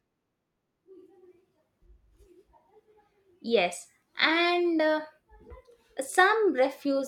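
No technical faults can be heard anywhere in the recording.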